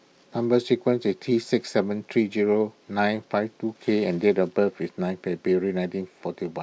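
Nothing stood out on listening to this speech recording.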